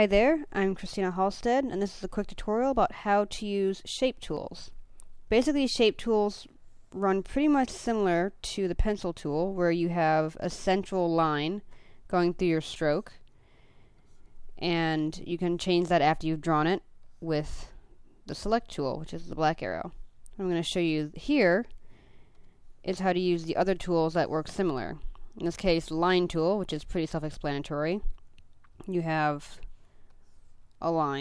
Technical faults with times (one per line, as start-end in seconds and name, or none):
none